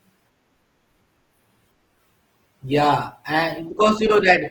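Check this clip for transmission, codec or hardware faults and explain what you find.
There's one problem, and it's codec-related. From 1.6 s to the end, an adaptive stream drops to a lower bitrate: the connection slowed, so the speech suddenly picks up more codec artefacts, which fits moving from roughly 64 to 16 kbit/s Opus.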